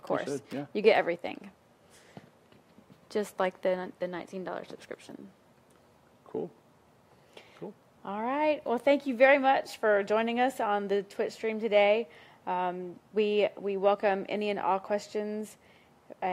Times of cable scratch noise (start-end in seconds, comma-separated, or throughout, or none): none